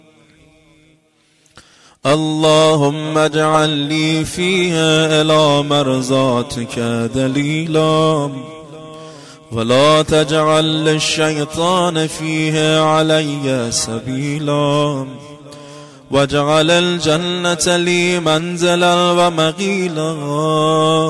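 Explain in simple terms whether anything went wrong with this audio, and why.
Listening carefully, nothing in this audio stood out as having gone wrong.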